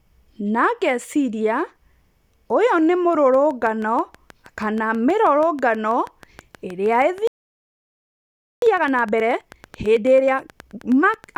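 From 3.34 s, just after "ũyũ nĩ", a train of clicks begins and runs to the end: regular pops at about 6.2 per second, roughly as loud as the speech, likely interference or a faulty connection or power supply. On a spectrogram they form evenly spaced thin vertical lines across all frequencies; the waveform shows matching sharp spikes.

At 7.27 s a playback stall cuts the output to silence for about 1.35 s, likely because the player ran short of data or its thread was blocked. The waveform goes flat until 8.62 s and the spectrogram shows a blank band.

From 8.62 s to 11.24 s comes time-compressed catch-up. The speech runs about 1.5 times too fast at unchanged pitch, as small pieces are cut and cross-faded. A spectrogram shows syllables packed closer together, while harmonic spacing stays the same.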